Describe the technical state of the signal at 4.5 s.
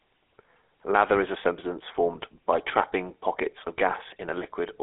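At 4.5 s the GSM full-rate codec is present, as throughout. The pulse-driven vocal-tract model leaves nothing above 3.8 kHz and adds buzzy, gravelly roughness that a clean telephone band-limit lacks.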